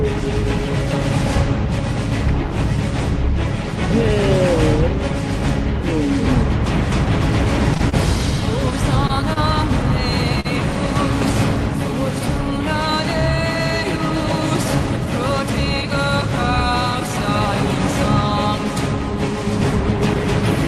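Between 7.74 and 10.46 s there's a run of scattered short gaps: around seven small packet losses, none longer than about 40 ms, which the receiver papered over by stretching the last sound. You hear them as quick ticks and little smears over a call-codec sound that tops out near 12 kHz.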